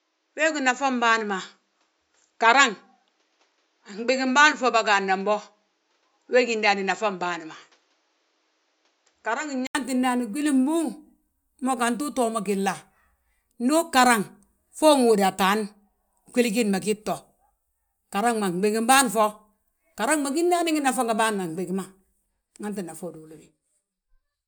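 From the start until 9.75 s the speech sounds dull and boxy, with nothing above 7.6 kHz and a faint noise floor roughly 45 dB down. It then opens up after an 80 ms gap at a similar level, likely an input switched from a poorer device.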